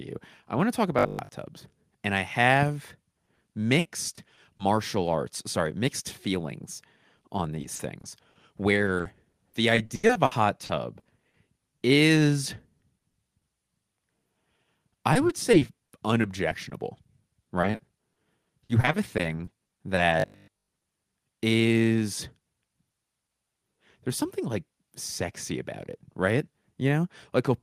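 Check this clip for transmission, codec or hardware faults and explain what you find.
The speech shows two transmission faults: robotic sound from repeated short buffers, and repeated packet loss with a robotic character.

Robotic sound from repeated short buffers occurs at 0.99–1.29 s and 20.2–20.7 s. It is a rigid metallic buzz at 50 Hz. The likely cause is a 20 ms segment being looped over most of each stretch while new audio is skipped.

Repeated packet loss (robotic sound) spans 3.25–4.61 s, 7.61–11.83 s, 12.79–13.43 s and 15.13–20.93 s. Concealment patches 12–19% of each span, with gaps up to 80 ms, leaving choppy speech with pieces missing.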